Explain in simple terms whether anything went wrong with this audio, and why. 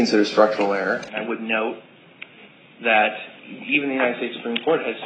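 At 1.08 s the sound abruptly turns duller and quieter, with nothing above about 3.8 kHz and a faint new background hiss, and it stays that way to the end with no gap at the change. This is likely an input switched to a poorer device.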